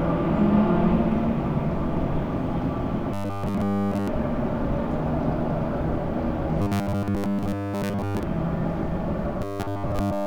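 From 3.14 to 4.08 s, 6.62 to 8.23 s and 9.42 s to the end, the sound turns into a rigid metallic buzz at 100 Hz. This is robotic sound from repeated short buffers, likely caused by a 10 ms stretch being looped while new audio arrived too late. The first stretch is almost entirely repeated; the later two mostly.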